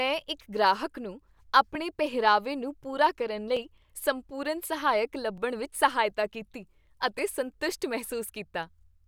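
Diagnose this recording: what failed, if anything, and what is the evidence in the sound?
A regular click runs through the speech from 1.75 s to 9.00 s, starting just after "ਇੱਕ ਗ੍ਰਾਹਕ ਨੂੰ" and recurring every 1.81 s, about five in all. This points to clock drift buffer slips at the driver or buffer stage. The likely cause is two devices on independent clocks differing by a few hundred ppm. The buffer between them drifts until a block of a few dozen samples is dropped or repeated, and each slip is heard as a click.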